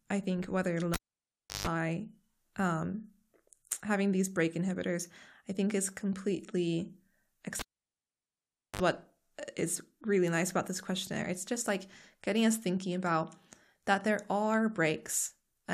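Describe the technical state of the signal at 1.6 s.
At 1.6 s the signal is in the last stage of a cable pulled and plugged in, which runs from 0.94 to 1.67 s. A live lead was yanked out, leaving about 0.68 s of near silence after the first pop. While it was pushed back in, only the tip made contact, so the ungrounded input picked up 50 Hz mains hum. That gives a buzz lasting about 0.15 s, ending in a second pop as the speech returns at 1.67 s.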